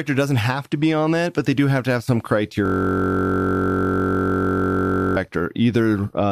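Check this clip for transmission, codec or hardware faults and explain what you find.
One fault is present, a system hang loop. From 2.66 to 5.17 s, right after "have to have some", the speech freezes. The driver stalled while the hardware kept replaying one 21.33 ms slice, which fits a 1024-sample buffer. This produces a steady 46.9 Hz buzz.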